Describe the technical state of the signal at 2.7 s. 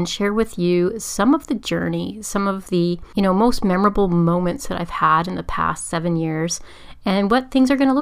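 The audio is intact at 2.7 s, with no audible fault at that moment.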